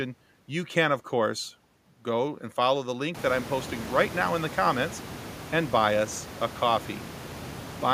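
No technical faults can be heard in this speech recording, and the room noise behind it, which rises by about 25 dB at around 3 seconds and then sits about 15 dB below the speech, belongs to the recorded space rather than to the signal chain.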